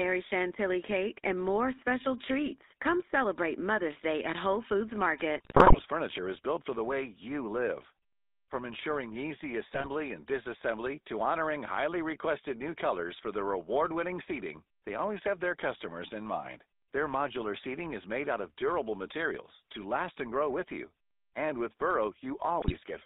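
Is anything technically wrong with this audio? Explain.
Yes. Throughout, the speech carries GSM full-rate codec coloring: a buzzy, gravelly roughness from pulse-driven vocal-tract modelling at what sounds like 13 kbps, band-limited to roughly 250 Hz–3.7 kHz, unlike plain telephone filtering. GSM bit errors strike at 5.36–5.83 s, just before "furniture is built for", at 9.74–9.89 s, between "ensuring easy" and "and disassembly to honoring", and at 22.60–22.77 s. Corrupted filter, pitch and gain values produce squawks, pops and gargling, unlike the clean silent gaps of dropped packets.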